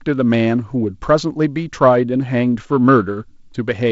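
Nothing stood out on listening to this speech, which carries the usual band limit of wideband telephone coding, with no content above about 7.7 kHz.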